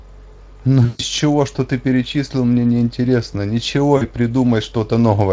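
Speech passed through a Speex VoIP link twice loses packets, and the decoder's VoIP packet loss concealment extrapolates from the last pitch and filter. From 0.85 to 1.02 s (about seven 20 ms frames) and 3.97 to 4.03 s, the audio smears into a fading buzzy tone or coloured noise before recovering.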